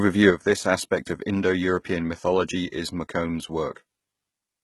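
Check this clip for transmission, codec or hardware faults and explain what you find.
Two problems here: codec damage across the whole clip, and a level drop that sticks.

First, the speech has heavy HE-AAC compression artefacts from start to finish. The codec likely kept only the lower spectrum and rebuilt the top end by spectral band replication, copying lower bands upward under a coarse envelope. The damage points to a very low bitrate, around 16 kbps. Because the rebuilt treble isn't the original, harmonics don't line up above the crossover, so s sounds come out gritty, metallic or lispy.

Second, there's a sudden gain jump at 0.31 s. The level drops by about 6 dB in one step and stays down for the rest of the clip. That's likely a digital gain change applied between one sample and the next with no ramp, the kind of thing a setting or bit shift does. Speech and background noise both drop together at that instant, which is how you tell it apart from someone just talking more quietly.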